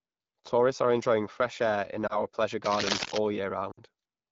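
At 2.08 to 2.18 s, lost AMR speech frames cause a brief dip or warble, consistent with one 20 ms frame failing its check and the AMR-WB decoder briefly concealing it from prior parameters. From 2.65 to 3.20 s, cable scratch noise, likely from a worn connector or cable moved under signal, adds dense, uneven rustling bursts at roughly the speech level. At 3.71 to 3.80 s, another run of lost frames, about 60 ms, is concealed by dropping the sound to near silence within two frames before the speech returns weak or rough.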